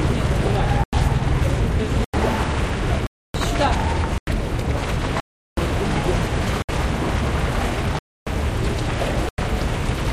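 The output buffer was likely left unfilled repeatedly, so blocks of samples went out as zeros: a block of digital silence at 0.84, 2.04, 3.07, 4.18, 5.20, 6.62, 7.99 and 9.29 s. Four last about 93 ms, which fits a 4096-sample buffer. The one at 5.20 s runs 372 ms, matching four such buffers. Those at 3.07 and 7.99 s last 279 ms, and the one at 6.62 s lasts 66 ms. Each cuts the sound off abruptly, leaving a short hole.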